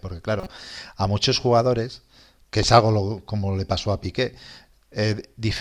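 Speech, with a corrupt frame decoded from 0.40 to 0.47 s: a short chirpy burst peaking around -20 dBFS, visible as misplaced energy across roughly two frames.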